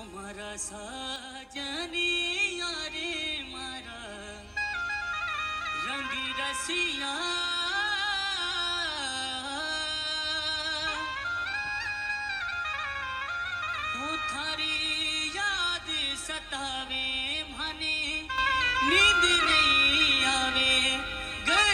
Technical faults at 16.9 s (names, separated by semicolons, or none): none